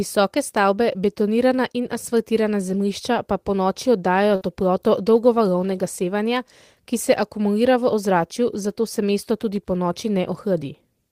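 At 4.35 to 4.43 s, between "zemljišča pa ponoči oddajajo" and "toploto dolgovalovnega sevanja ki", a burst of packet loss leaves a gap. About 54 ms is covered by the last sound held on and fading, unlike a silent dropout, and then 60 ms of speech is skipped outright.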